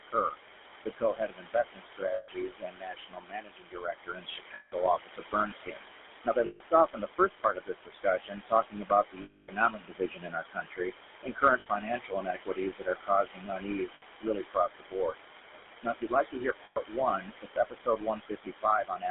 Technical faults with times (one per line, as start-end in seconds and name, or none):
0.00-19.11 noise suppressor artifacts
0.00-19.11 GSM full-rate codec
0.05-0.38 speech cut by the noise suppressor
0.81-15.18 speech cut by the noise suppressor
2.14-2.29 lost GSM frames
4.54-4.73 lost GSM frames
6.46-6.61 lost GSM frames
9.22-9.49 lost GSM frames
11.60-11.67 lost GSM frames
13.94-14.03 lost GSM frames
15.81-19.11 speech cut by the noise suppressor
16.64-16.77 lost GSM frames